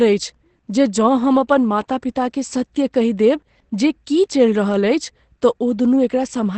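From start to finish the speech carries heavy Opus compression damage, likely from the encoder running in its SILK speech mode at a very low rate, which fits roughly 12 kbps. Treble is missing, leaving the speech muffled and hoarse. On a spectrogram a flat ceiling cuts all energy at about 8.7 kHz, the wideband limit, with coarse, smeared harmonics below it. The waveform shows no gaps or clipping.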